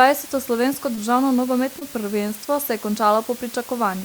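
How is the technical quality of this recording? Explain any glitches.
The technical quality is poor: a constant hiss covers the whole speech clip, and two brief glitches break it.

Low bit depth with dither runs throughout. The audio is quantised to only 6 bits, but dither added before rounding turns the error into steady, even white noise rather than distortion. That noise sits roughly 20 dB below the speech, present under every syllable and in the pauses, with no gritty or buzzing character.

Short concealed packet loss occurs at 0.95–0.99 s and again at 1.79–1.83 s, just before "prvenstvo se je". Each time about 20 ms of audio never arrived, and the receiver patched the gap by extending the preceding sound, pitched where it was voiced and as shaped noise where it was not, for 16 ms and 19 ms respectively, then blended back. Each gap is heard as a brief smear or wobble.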